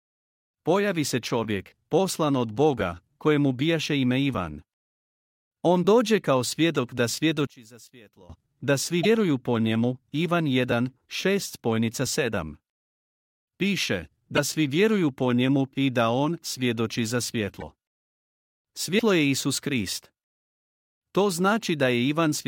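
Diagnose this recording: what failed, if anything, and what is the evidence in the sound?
From 7.47 to 8.30 s, between "dođe kao svjedok da" and "da svi", the speech drops by about 22 dB and turns faint and distant, the centred voice nearly gone. This is one channel inverted, most likely from a reversed wire at the analogue stage, and it is exposed once the channels are summed to mono. The identical centre content cancels and only the small left-right difference survives. On a waveform the amplitude collapses abruptly for that span. A spectrogram shows the low end and the voice harmonics fading to a faint residue.

Four brief glitches, each about 30 ms, occur at 9.03 s (just after "da svi", before "po njemu"), 14.36 s, 17.60 s and 18.98 s. Each lasts roughly one 26 ms frame, which points to a broken MP3 bit reservoir, likely from frames lost in storage or transfer. After the gap, a decoded frame reaches back for borrowed bits and gets bytes from the wrong frame. 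On a spectrogram this shows as a narrow vertical smear of noise or a short blank slot. The waveform shows a discontinuity where the audio jumps ahead.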